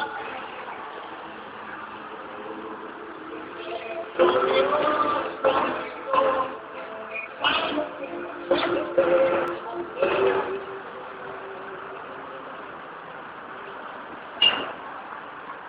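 At 9.48 s the sound jumps forward with no gap. About 5 ms of audio is missing. This is likely a dropped buffer (overrun). The samples were overwritten before being read, so the surrounding audio was spliced together.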